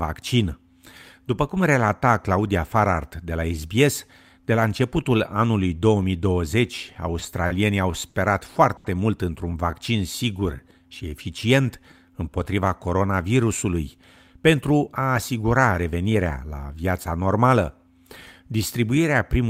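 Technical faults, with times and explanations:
6.93 to 8.87 s (stalls at 6.93, 7.19, 7.47, 8.10, 8.77 s), short stall from a late packet: speech briefly hangs on a held sound for 20, 20, 30, 50 and 80 ms as the jitter buffer ran empty and the last audio was stretched until each packet arrived.
9.71 to 12.45 s, jitter buffer slow-down: speech drags at about 92% speed without dropping in pitch, as repeated pitch periods added 215 ms to rebuild the buffer's reserve.
14.22 to 16.45 s, jitter buffer speed-up: speech sounds hurried at about 112% speed with unchanged pitch, because roughly a third of a second of pitch periods was cut to shrink the buffer's excess delay.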